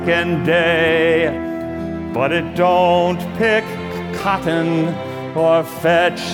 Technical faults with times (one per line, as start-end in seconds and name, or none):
none